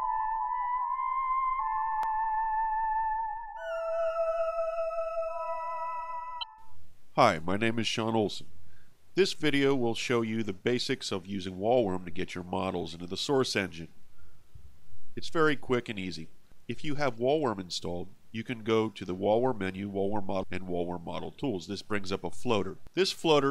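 Three short glitches break through the sound, at 1.56 to 1.60 s, 6.39 to 6.44 s and 20.39 to 20.43 s. Each is a brief glitch from damaged data in a compressed stream: the decoder hits corrupted frames, loses sync and scrambles until it finds the next valid frame header.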